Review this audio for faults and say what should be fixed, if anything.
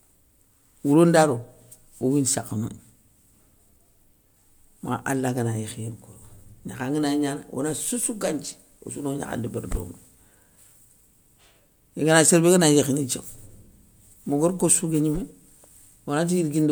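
Nothing here needs fixing, since the speech comes across without any audible technical faults.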